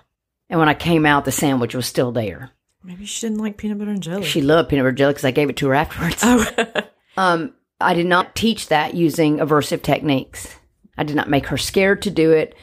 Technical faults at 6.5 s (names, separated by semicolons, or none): damaged data in a compressed stream